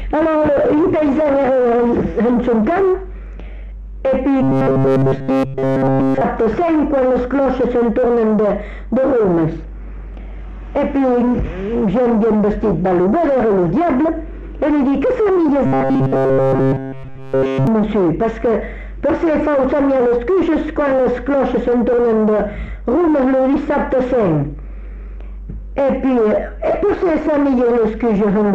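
Around 4.43 to 6.21 s, and again from 15.66 to 17.67 s, the audio collapses into robotic sound from repeated short buffers. Each stretch is a rigid, metallic buzz pinned at 134 Hz. That period of about 7.5 ms points to a tiny chunk of audio being looped over and over, most likely because fresh data wasn't arriving in time. Almost nothing new gets through during either stretch.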